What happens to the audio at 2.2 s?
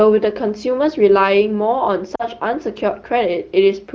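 From 2.15 to 2.26 s there are lost AMR speech frames: about 40 ms, fitting two frames, is concealed by repeating the last good parameters at falling gain, so the sound drops to near silence.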